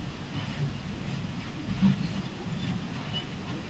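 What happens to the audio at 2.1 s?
At 2.1 s the speech carries on intact, with no dropout, glitch or other fault, only the normal band limit of the call path, which leaves nothing above about 8 kHz.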